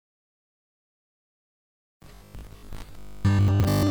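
From 2.03 s to the end, the sound turns into a rigid, metallic buzz pitched at 50 Hz. This is robotic sound from repeated short buffers, likely caused by a 20 ms stretch being replayed whenever new audio arrived too late, so most of the material is skipped. On a spectrogram it appears as evenly spaced horizontal harmonic lines at multiples of 50 Hz, and the waveform shows the same short shape repeating.

Between 3.48 and 3.64 s, chunks play out of order. A 40 ms chunk arrives three chunks late and plays after the ones meant to follow it, so the passage sounds jumbled, with three hard joins. These joins appear as abrupt steps in the waveform.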